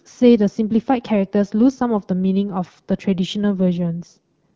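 Between 3.53 and 4.18 s, an AMR rate drop sets in: the link weakens and the wideband codec is pushed to a lower mode, which fits a step down from 12.65 to about 8.85 kbit/s. With fewer bits, the speech turns rougher and more synthetic, with no gap or band loss, then recovers.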